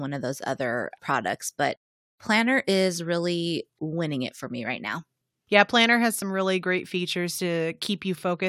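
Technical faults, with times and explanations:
4.85 to 5.49 s, drift correction step: The likely cause is software keeping two clocks aligned that changed the playback rate in a single jump to rebalance its buffer. For about 0.64 s the speech runs roughly 6% fast and rises by about a semitone (101 cents), because speed and pitch move together when the rate changes. The shift comes in abruptly and then snaps back to normal. The result is a brief, detuned, hurried stretch of speech.
6.22 s, overlap between stream segments: Two consecutive stream segments carried time stamps that overlapped, so the player discarded the overlapping portion even though that audio had not actually been duplicated. Roughly a hundredth of a second of speech is lost, and the waveform jumps straight from one point to a later one. That discontinuity is heard as a tiny skip, at a segment boundary consistent with 4-second segments.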